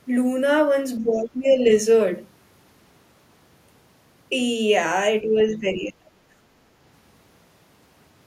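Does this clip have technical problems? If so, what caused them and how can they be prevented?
Yes. Speech suppressed in double talk, most likely from an echo canceller that could not tell the talker apart from loudspeaker echo while both sides spoke, pulls the speech down from 1.02 to 1.72 s by around 15 dB and from 5.22 to 6.33 s by around 30 dB, nearly cutting it out. Better double-talk detection, or echo suppression that stays gentle while the near talker is active, would prevent this.

The other side's voice leaking through, likely residual loudspeaker echo the canceller left in the microphone signal, appears as a brief, very faint scrap from 1.13 to 1.2 s, roughly 35 dB below the speech. Lower loudspeaker volume, a headset, or a better-converged echo canceller would prevent it.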